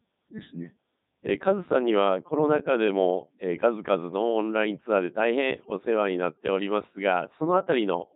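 Speech runs through a Codec 2 vocoder for its whole length, and the damage is heavy. The voice sounds robotic and buzzy from start to finish. The decoder does not keep the original waveform. It rebuilds the voice from sine waves, using only pitch, voicing, energy and a rough spectral envelope. The result is a synthetic, mechanical tone. The clip uses Codec 2's highest mode, around 3.2 kbit/s.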